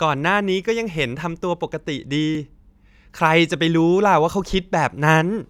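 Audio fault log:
2.35 s and 4.46 s, dropped buffer (overrun): two spots where the speech jumps ahead. A few milliseconds of audio are simply gone, and the two sides butt straight together with no gap. That's likely the app not reading its buffer before the hardware overwrote it.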